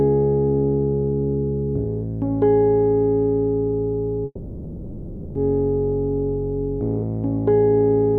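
At 4.25 s the sound breaks off and does not properly return until 5.37 s, a gap of about 1.1 s, which is likely a long network dropout. The receiver stretches the last fragment into a buzzy hiss that fades away, leaving a brief moment of near silence before the audio resumes with that stretch simply skipped. On a spectrogram, the last spectrum smears sideways into fading horizontal bands, followed by a thin dark strip and an abrupt restart. The waveform shows the same decaying tail, then a flat line.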